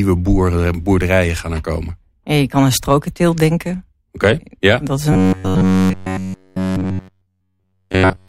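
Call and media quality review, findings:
Robotic sound from repeated short buffers, 5.13 s to 8.28 s: metallic 93.8 Hz buzz, fitting a repeated buffer of about 10.7 ms, for the entire stretch. Likely a playout buffer underrun. Unlike dropouts, there are no silent gaps.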